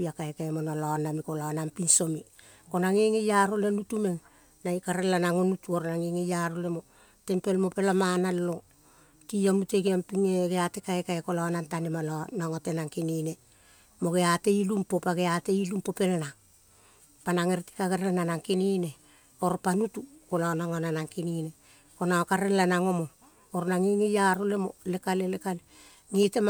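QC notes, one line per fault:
No fault to note.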